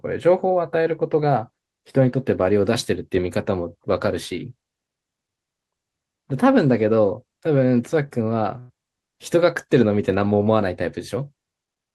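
At 8.59 s a burst of packet loss interrupts the speech until about 8.84 s. The receiver fills roughly 97 ms by continuing the last sound and fading it out, then skips ahead, so about 60 ms of speech never arrives and the timing jumps. On a spectrogram, the held sound runs flat and dim like a frozen smear, then breaks off at a hard vertical edge. The waveform shows a tapering, repetitive envelope before the abrupt restart.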